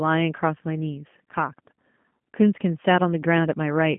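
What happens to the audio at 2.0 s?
At 2.0 s you're hearing G.729 codec damage running through the whole clip: speech rebuilt from a filter and sparse pulses, slightly rough, nothing above 3.4 kHz, fitting an 8 kbit/s stream.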